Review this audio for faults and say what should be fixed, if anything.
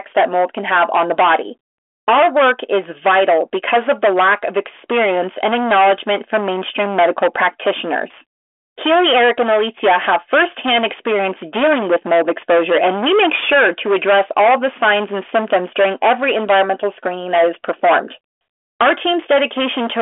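Hard clipping runs through the whole clip, on every loud passage of the speech. The signal reaches the converter or gain stage about 13 dB hotter than it can pass, so roughly a fifth of the samples are sliced off flat at the ceiling. Those squared-off peaks add a dense set of high harmonics, heard here as a harsh, buzzy fuzz riding on the voice rather than occasional crackle. The distortion sits inside the narrow telephone band, which cuts off near 3.7 kHz. To prevent it, lower the input or preamp gain by at least 13 dB, or add a limiter before the stage that overloads, so peaks stay below full scale.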